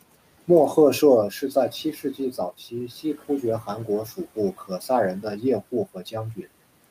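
Throughout the clip, noise suppressor artifacts appear: the suppressor pulls steady-noise bands down by about 18 dB, so the room noise, about 19 dB under the speech, sinks between the words and rises under them. Speech is also cut by the noise suppressor when it mistakes parts of the speech for noise. This happens at 1.31–2.38 s just after "莫贺设", 2.58–3.43 s, 4.05–4.89 s, 5.72–6.14 s and 6.34–6.46 s. Brief stretches drop by about 10 to 15 dB, most deeply in the third span, and sound swallowed and faint.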